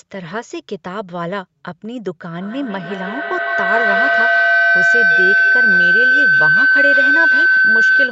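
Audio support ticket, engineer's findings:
Feedback howl from 2.41 s to the end. A tone around 1.5 kHz pulses about every 150 ms and peaks at about 9 dB over the speech. Two devices in the same room are on the call, so each mic picks up the other's speaker. Loop gain is above unity, so every pass gets louder and it won't stop until someone mutes. Top end stops at 8 kHz through the Opus path, as expected.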